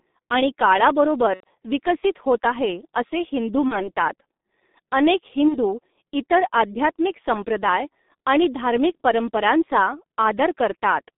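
Across the whole clip the speech sounds muffled and hoarse, with smeared consonants and nothing above roughly 3.7 kHz or below 200 Hz. This is heavy G.723.1 codec damage, consistent with its 6.3 kbit/s mode, where coarse 30 ms frames blur fast articulation.

From 1.35 to 1.44 s, just before "विकसित होत आहे असे", the voice turns into a brief, fading smear. This is VoIP packet loss concealed by the speech codec: about 90 ms went missing, which fits three 30 ms frames. The decoder filled the gap by stretching its last pitch and spectral shape at falling gain.

From 3.68 to 3.88 s, right after "होत आहे असे हिंदू", and again from 5.48 to 5.57 s, shorter dropouts appear, each from about 30 ms of loss. The distortion outlasts the gap because the decoder's predictions take time to recover.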